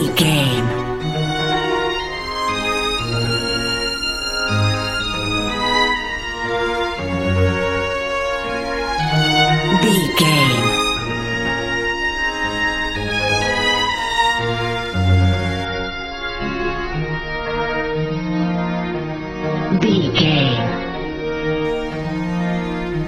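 An adaptive stream at a lower bitrate runs from 15.65 to 21.65 s: the player switched to a leaner encoding when the connection slowed. Without any gap, the treble vanishes above 6.5 kHz and codec artefacts thicken, which fits a drop from roughly 96 to 24 kbit/s AAC.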